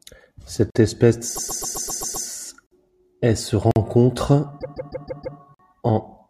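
At 0.70 s there's a gap between chunks, a hole of about 48 ms. From 1.35 to 2.26 s you get repeated frames: a 131 ms block, likely five codec frames, plays seven extra times, stuttering and adding 0.91 s. More chunk gaps follow at 2.67 and 3.71 s. From 4.59 to 5.37 s a 157 ms block repeats five more times, adding 0.78 s. A last gap hits at 5.54 s. The gaps land on roughly one-second chunk joins.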